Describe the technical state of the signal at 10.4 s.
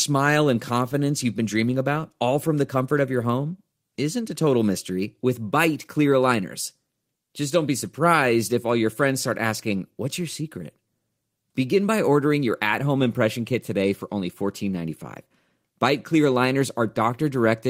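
The speech signal at 10.4 s is intact, with no technical fault present at that moment.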